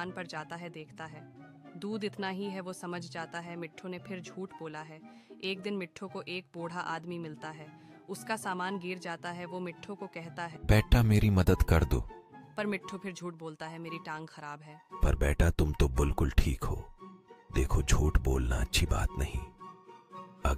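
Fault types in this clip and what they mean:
No faults to list: no dropouts, level jumps, distortion or timing errors turn up anywhere in the audio.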